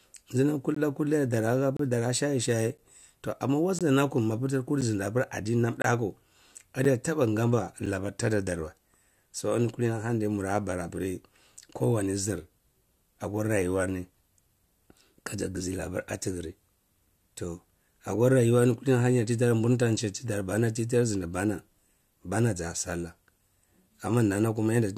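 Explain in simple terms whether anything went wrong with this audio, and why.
The stream is built from one-second segments whose timestamps don't quite meet, so the player fills each seam with silence. This gap between stream segments cuts short, hard-edged holes into the speech at 0.75–0.77, 1.77–1.79, 2.78, 3.79–3.81, 4.81, 5.82–5.84, 6.85 and 7.86 s.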